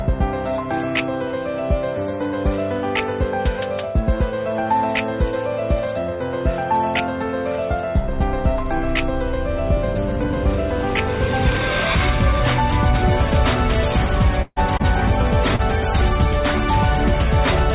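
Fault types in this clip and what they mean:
Burst of packet loss: Several consecutive packets, or one long one, failed to arrive in time, so the receiver had no real audio for roughly 150 ms. It stretched the last sound it had across about 142 ms while fading it down, and that fade ends in roughly 40 ms of silence. Between 14.42 and 14.59 s this comes across as a sustained, dimming tail with a brief dropout, after which the sound picks up further along, having skipped the missing stretch.
Short concealed packet loss: A single brief run of packets, about 30 ms each time, missed the decoder's deadline. The receiver papered over the hole by continuing the preceding sound for roughly 20 to 30 ms and then blending back into the real signal. At 14.77 s and again at 15.56 s this leaves a short smear or wobble rather than a clean gap, and a brief sound falling inside either hole can disappear entirely.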